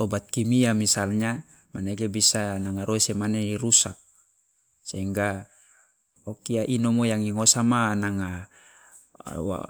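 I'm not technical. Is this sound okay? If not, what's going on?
Yes, nothing's going wrong here, so you can relax about this recording.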